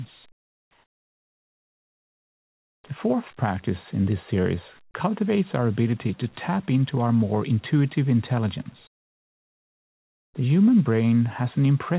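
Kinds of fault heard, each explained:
Comfort noise in place of the background: The sending side most likely stopped transmitting during quiet stretches and sent only occasional background descriptions, leaving the receiver to synthesise a stand-in noise. From 0.32 to 2.84 s and again from 8.87 to 10.34 s, the real background, already about 34 dB below the loud parts, gives way to a flat, detail-free hiss roughly 13 dB quieter, limited like the rest of the band to below 4 kHz.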